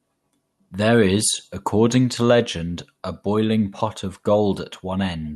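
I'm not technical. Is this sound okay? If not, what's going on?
Yes, this speech recording shows no technical faults; it came through an ordinary internet call connection, which trims the very highest treble above roughly 12 kHz, and that is normal for calls.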